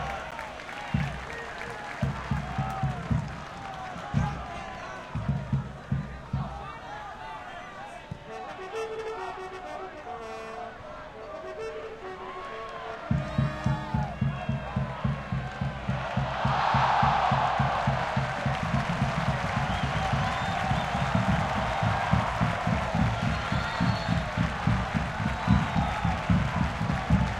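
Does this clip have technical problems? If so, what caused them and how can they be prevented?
Yes. At 0.31 s the sound drops out abruptly for about 11 ms, too short to register as silence, so it comes across as a tick or dip. It is a block of digital silence: a run of zeros, which fits a 512-sample buffer, played in place of the audio, either because the output buffer was not filled in time or because a calculation produced invalid numbers. Preventing it means giving the audio thread enough buffer headroom and priority, and catching invalid values before they reach the output.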